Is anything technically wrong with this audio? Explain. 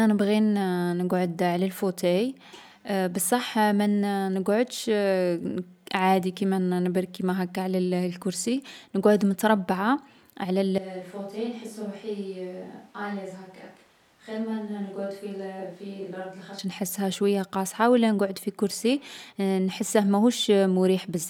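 Yes. A switch to a distant microphone runs from 10.78 to 16.59 s, between "على الـ" and "نحسها شويا قاصحة و". The close microphone's feed likely dropped out, leaving a far pickup. The speech abruptly turns roomy, hollow and thin in the bass, roughly 10 dB quieter, with room noise rising to around 30 dB below it.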